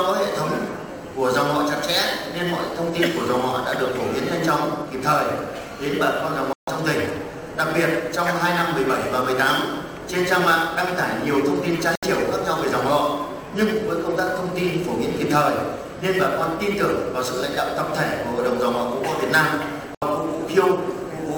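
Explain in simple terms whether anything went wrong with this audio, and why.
Two things went wrong. Sample clock jitter runs through the whole clip: an unsteady converter clock adds a fine roughness that grows on loud, bright passages, unlike steady background hiss. There are also three digital broadcast dropouts, where the sound falls abruptly silent and then returns: at 6.53–6.68 s, 11.95–12.03 s and 19.95–20.02 s. Unlike a crackle, these are clean holes where the receiver muted, consistent with a few lost frames each.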